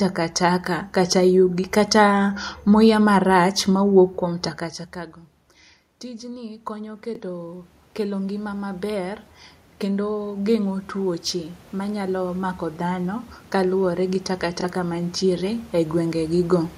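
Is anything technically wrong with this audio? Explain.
Yes, there are two problems here, and they overlap a bit.

The first is automatic gain rising, which happens twice. From 6.01 to 9.3 s the input drops by about 21 dB, and the AGC responds by slowly adding about 9 dB of gain. From 9.81 to 16.73 s it climbs again, by about 10 dB. Because the gain is applied to the whole signal, the voice and the room noise swell up together over a few seconds. That's different from the talker shifting position around 4.5 s, where only the voice level changes.

The second is Bluetooth stutter, at 7.15 to 7.20 s and again at 14.61 to 14.64 s. Each time, about 23 ms of audio goes missing, which fits a single lost or late packet. The receiver fills the gap by replaying its last chunk, so you hear a short repeat. When playback picks back up, it jumps ahead as though the audio had kept playing through the gap.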